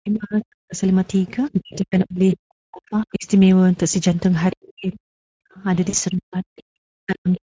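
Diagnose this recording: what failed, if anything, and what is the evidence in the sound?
Codec stage: the whole recording carries audible Speex codec damage. The speech has the hoarse, grainy texture of CELP coding with too few bits for the excitation signal, which fits a mid-quality Speex mode around 16.8 kbps. The wideband content up to the 8 kHz limit set by the call chain sounds like shaped noise rather than real detail, which is typical of Speex filling its upper band at these settings.

Call processing, echo cancellation: the talker drops by up to about 40 dB across 0.0–0.8 s, 1.53–3.26 s, 4.62–5.64 s and 6.11–7.4 s. The voice ducks, thins or breaks into fragments within each span. This pattern points to speech suppressed in double talk, likely caused by the canceller failing to separate the near talker from loudspeaker echo while both sides spoke, and attenuating everything.

Call processing, echo residue: brief scraps of a second voice appear at 2.33–2.37 s and 4.51–4.56 s at about 15 dB below the talker, at 6.58–6.63 s at about 30 dB below, and at 7.33–7.37 s at about 25 dB below. 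These are most likely the other side's voice leaking through, as loudspeaker pickup that the canceller only partly removed.

Network stage: two short dropouts were smoothed over by the decoder. The one at 3.91–3.95 s fits a single lost 20 ms frame, and the one at 5.89–5.95 s fits 40 ms of loss. Each gap becomes a short fading extension of the preceding sound, a buzzy tone or coloured noise, which is VoIP packet loss concealed by the speech codec. Because the decoder state has to rebuild after the gap, the distortion lingers briefly once packets resume.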